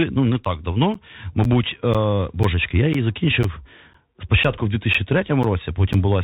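Bluetooth CVSD headset codec, throughout: the sound points to one-bit slope coding at 64 kbps, with nothing above 3.8 kHz, scratchy sibilants, granular hiss and distorted loud peaks.

Periodic USB or driver dropouts, from 0.45 s (just after "ну не") to 5.94 s: every 0.5 s, about 10 ms goes silent, leaving roughly ten evenly spaced ticks.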